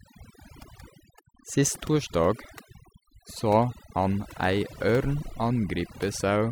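Overdone noise removal runs through the whole speech clip. The noise reducer was set too aggressively, so it cut frequency bands near its noise estimate deep or to nothing, taking quiet parts of the speech with them. Pauses fall to near silence with twinkling specks.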